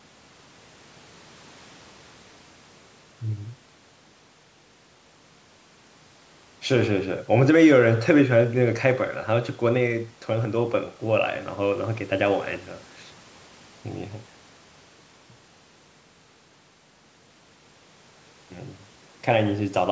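Listening to the speech, nothing stood out as a fault, with the bass trimmed and the top ending around 8 kHz as expected from ordinary call microphone processing.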